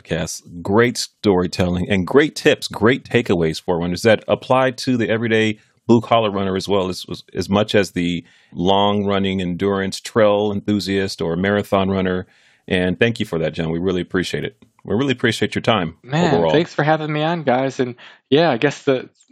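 Nothing stood out as a technical fault on listening to this speech recording.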